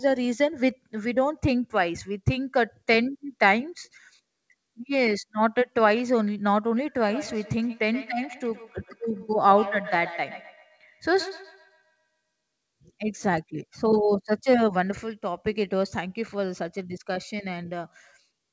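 From 7.05 s to 12.21 s the speech picks up a feedback echo between two devices. A second device in the same room seems to be playing this call aloud, and the microphone here hears it again. Each syllable returns at a steady interval of roughly 150 ms, thinner and more ringing with every pass, peaking at about 14 dB below the speech. Room reverberation gives a smooth decay, but these are distinct, evenly spaced repeats. Through the call codec's 8 kHz band limit, the repeats carry nothing above 8 kHz.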